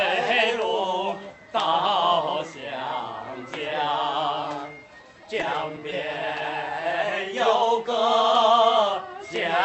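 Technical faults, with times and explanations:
5.01 to 5.92 s, scattered short gaps: about five brief dropouts fall across this stretch of the call path's audio, none longer than around 10 ms. The receiver filled each hole by extending the sound just before it, so roughly 50 ms of the span, about 7 percent, is concealment rather than real signal. That is why the sound stays clear but picks up small ticks, smears and hiccups. The timing also drifts slightly, with 40 ms lost and 34 ms inserted.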